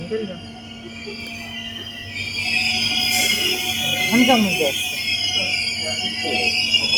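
A noise suppressor designed for speech was left active on this sound recording, so it treats steady material and decaying tails as noise, letting onsets through while sustained parts sink, and the level pumps by around 10 dB across the whole clip. Within this, the sound is cut by the noise suppressor from 0.00 to 2.16 s: the processor mistakes it for noise and pulls it down by up to about 7 dB for roughly two seconds.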